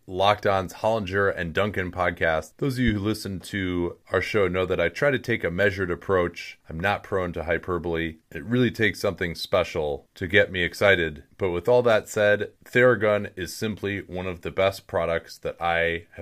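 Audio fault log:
2.88–2.90 s, loud pop: a single sharp pop sits on top of the speech, which carries on underneath without a break. It peaks around 10 dB above the surrounding signal and lasts about 28 ms. This is likely a sudden voltage step or pulse, perhaps from a switch, static or a driver glitch, shaped by the circuits downstream into a brief thump. On the waveform it shows as one tall, narrow spike. On the spectrogram it is a thin vertical stripe spanning the whole frequency range.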